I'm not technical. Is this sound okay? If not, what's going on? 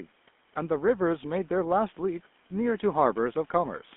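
No. From start to finish the speech sounds buzzy and gravelly, like an old mobile phone call, with a thin, muffled top. That's the GSM full-rate codec. It rebuilds speech from a simplified model, and the line carries nothing above about 3.5 kHz. The faint room noise behind it is just the recording space.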